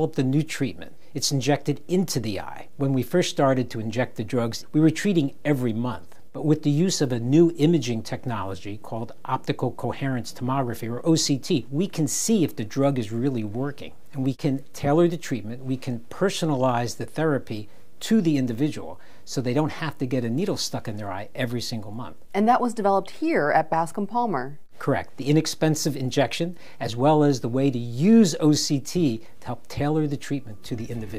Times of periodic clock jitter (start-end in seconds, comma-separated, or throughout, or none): none